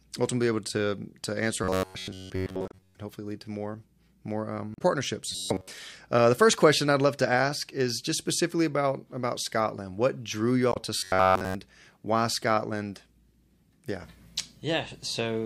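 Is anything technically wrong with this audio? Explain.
Yes. The speech has two kinds of fault.

Robotic sound from repeated short buffers appears from 1.64 to 2.95 s, 5.32 to 5.68 s and 10.97 to 11.55 s. It is a rigid, metallic buzz at 93.8 Hz. The likely cause is a fragment of about 10.7 ms being replayed over and over while new audio is skipped. Most of each stretch is repeats, and the last one is all repeats.

Damaged data in a compressed stream is heard at 2.68 to 2.74 s, 4.72 to 4.82 s and 10.70 to 10.77 s. Each is a brief chirp, squawk, click or short hole. Corrupted frames stop the decoder reading correctly, and it loses its place until it finds the next valid frame.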